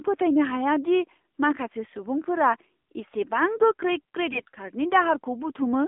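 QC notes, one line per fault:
throughout: AMR narrowband mobile codec. The sound is confined to roughly 250 Hz to 3.6 kHz, with a buzzy, synthetic quality that fits a low 7.4 kbps mode. On a spectrogram the energy stops at a hard ceiling near 3.6 kHz, and the harmonics look smeared.
4.30–4.50 s: AMR bit errors. For about 0.2 s, 11 frames, the speech keeps its pitch and level but turns hoarse, scratchy and gargly. Heavily corrupted frame data misplaces the excitation pulses and skews the spectral values. A spectrogram shows smeared, noisy harmonics, but the waveform envelope stays steady.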